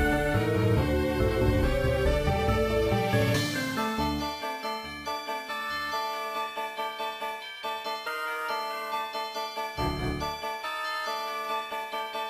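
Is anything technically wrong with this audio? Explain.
No, I hear no technical problems in this audio.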